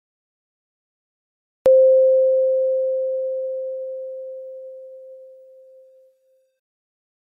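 A music clip with a cut-off start: the first 1.66 s are digital silence, and the music then appears abruptly at 1.66 s already in progress, with no natural attack or fade-in. The material before that point is simply absent, as if the stream or recording was already running when capture began and the opening of the passage was never written. The entry is a hard edge rather than a musical onset.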